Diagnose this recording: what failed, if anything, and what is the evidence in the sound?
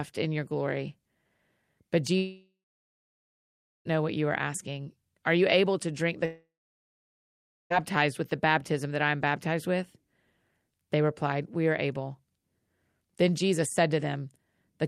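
Long network dropouts, likely from lost packets, at 2.17–3.87 s (ending at "know what you are") and 6.25–7.72 s (after "able to drink the"). Each time the sound smears briefly, then falls silent for over a second before resuming.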